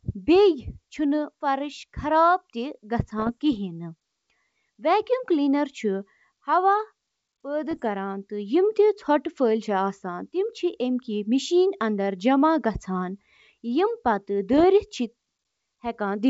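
Three short bursts of bit errors on an ADPCM link occur at 3.19–3.31 s, 7.71–7.83 s and 14.53–14.64 s, each about a tenth of a second of pops and rough crackle. At an error rate under one percent, each corrupted bit also upsets the decoder's step size and predictor, so the disturbance rings on briefly with brief jumps in level.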